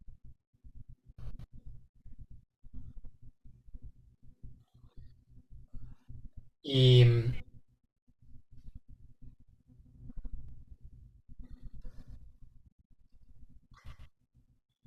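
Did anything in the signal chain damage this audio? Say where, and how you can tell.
Yes, a doubled audio track appears abruptly at 10.49 s and runs to the end: a dry, full-band copy of the speech trails roughly 150 ms behind, about 5 dB quieter. The likely cause is a second, slower capture path mixed in alongside the direct one.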